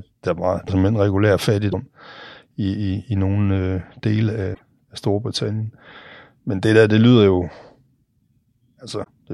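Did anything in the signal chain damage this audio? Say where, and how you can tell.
Yes, at the codec stage: four short glitches in the speech, at 0.67–0.70 s (between "der var" and "simpelthen regulær"), 1.71–1.74 s (after "simpelthen regulær"), 4.53–4.63 s and 9.03–9.08 s. Each is a chirp, a burst of noise or a brief dropout where the audio skips ahead, one to a few 26.1 ms frames long. The likely cause is a broken MP3 bit reservoir: after frames went missing, the next frame pulled its borrowed bits from the wrong bytes. On a spectrogram each shows as a thin broadband smear or blank strip, and in the waveform as an abrupt discontinuity.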